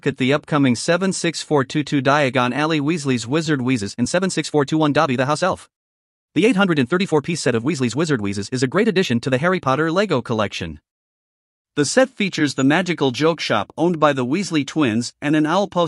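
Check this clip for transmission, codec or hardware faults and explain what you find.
One fault stands out: a time-stretched section from 3.71 s to 9.67 s, where the speech suddenly runs about 1.45 times faster while its pitch stays put, then drops back to normal pace. It sounds rushed. The likely cause is software squeezing that stretch to fit a shorter length by dropping short slices of audio and splicing the remainder together. On a spectrogram, harmonics hold their spacing while syllables crowd closer; the waveform shows compressed envelopes and small discontinuities at splice points.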